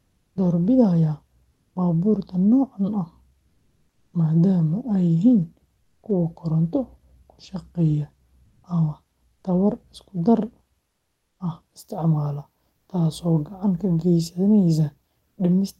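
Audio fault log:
0.03–0.35 s, 1.55–1.75 s, 5.83–6.03 s, 8.47–8.63 s, 10.91–11.39 s, 12.79–12.87 s: comfort noise in place of the background. In these pauses the real room sound, already about 47 to 56 dB below the loudest speech, gives way to a steady, featureless hiss lasting 80 to 480 ms. This is likely discontinuous transmission in the call codec, with the receiver synthesising filler noise. Unlike a noise gate or dropout, the pause never goes silent. The level shifts at most swaps, about 4 dB lower at 10.91 s and about 7 dB higher at 8.47 s, across audio band-limited near 12 kHz.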